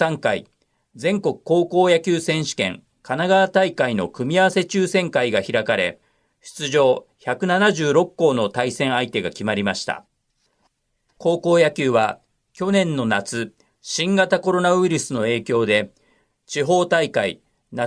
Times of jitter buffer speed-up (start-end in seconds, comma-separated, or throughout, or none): none